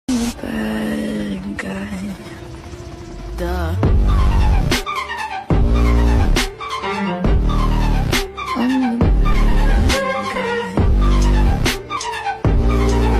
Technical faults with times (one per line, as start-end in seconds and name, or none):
4.83-4.85 compressed frames skipped
11.96 compressed frames skipped